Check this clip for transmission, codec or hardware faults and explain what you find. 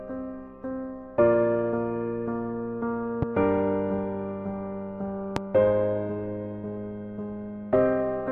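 Two loud pops are present. Both are loud pops, at 3.22 to 3.26 s and 5.36 to 5.40 s, peaking about 15 dB and about 20 dB above the sound. Each is a single sharp thump, likely from a voltage pulse such as a switch or driver glitch entering the signal chain. The sound continues underneath.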